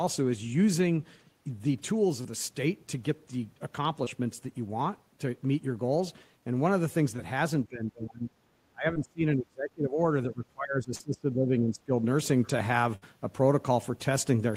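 Around 2.21 to 2.27 s there's a short concealed packet loss: roughly 40 ms of the speech never arrived in time, and the decoder papered over it by stretching the preceding sound before easing back into the real signal. You hear it as a quick smear rather than a hole. The same thing happens, more briefly, at 4.05 to 4.08 s and 7.16 to 7.20 s, each about 20 ms missing, and each just a brief wobble.

From about 7.69 s things change. The voice starts dropping out in chunks: 7.69 to 8.32 s with a dip of around 20 dB, then 8.69 to 9.99 s sinking by around 30 dB, then 10.27 to 11.96 s back at around 20 dB. It pumps down, loses its top end and comes back in pieces. That's most likely speech suppressed in double talk: the far side was talking too, and the echo canceller, unable to tell the near talker from loudspeaker echo, turned everything down. Inside that last stretch, 10.95 to 11.02 s adds another short concealed loss of about 40 ms, a small smear on top of the ducking.

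Last, at 12.96 to 13.04 s there's a burst of packet loss, about 60 ms gone in one go. The concealment holds the last sound as a fading buzz or hiss, then the speech picks up slightly further along, with that sliver simply missing.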